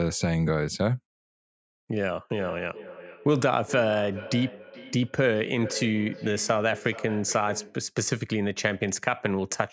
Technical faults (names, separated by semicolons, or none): feedback echo between two devices